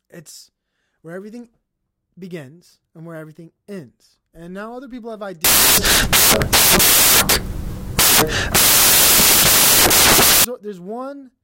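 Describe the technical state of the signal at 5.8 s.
At 5.8 s the speech has collapsed into samples built from the wrong bytes, from 5.44 to 10.44 s, just after "now other people have". The reader misassembles each sample's bytes, so the jittery low bits dominate and loud, harsh broadband noise results.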